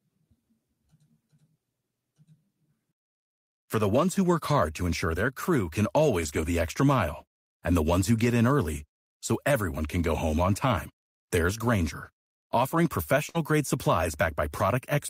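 From 6.21 to 6.43 s the speech turns rougher and noisier for a stretch of about 120 ms, though nothing drops out. This is a lost packet rebuilt from error correction. Several packets went missing, which fits six 20 ms packets. Each following packet carried a coarse low-bitrate copy of the lost one, and the decoder played those copies instead of leaving a gap, so the sound continues but with reduced detail.

At 13.29 s the sound freezes into a held, fading tail for about 50 ms, and the speech resumes at 13.36 s with about 40 ms of it simply gone. This is a burst of packet loss. Packets arrived too late or never arrived. The receiver stretched the last sound it had and turned it down while waiting, then skipped ahead, so the material in between is missing.

Overlapping the end of that burst, from 13.34 to 13.36 s, a brief 20 ms slice sounds grainier. This is another lost packet rebuilt from error correction, this time a single packet replaced by its low-bitrate copy.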